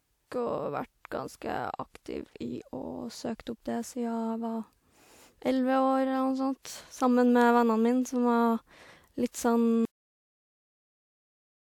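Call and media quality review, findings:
Cut-off end at 9.85 s. Speech stops abruptly mid-sound, with no natural decay. Silence fills the remaining time to 11.63 s. Probable component: recording or playback write path. Mechanism: final buffers never written or played out, so the stream halts inside a sound. Likely a missed flush at stream close. Check end-of-session buffer handling.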